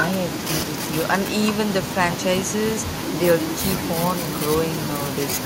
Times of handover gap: none

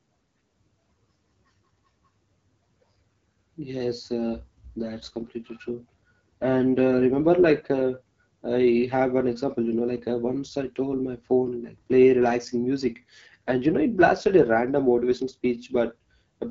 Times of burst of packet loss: none

